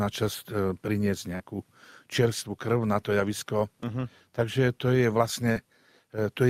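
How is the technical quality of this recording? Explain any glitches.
Two brief glitches mark the recording, both short concealed packet loss, at 1.35 to 1.42 s and 5.52 to 5.57 s. About 40 ms of audio arrived too late each time, so the decoder extended the preceding sound and crossfaded back, giving a quick smear or wobble. A spectrogram shows briefly smoothed, repeated texture; the waveform shows a short, overly regular stretch.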